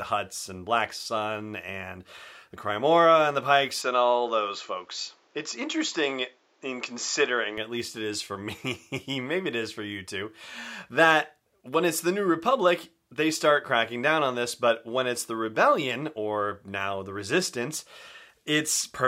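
From 3.8 s to 7.6 s the speech turns duller and boxy, with a faint new noise floor well below it and no gap or level jump; the likely cause is an input switched to a poorer device. A spectrogram shows everything above 7.6 kHz missing for that stretch.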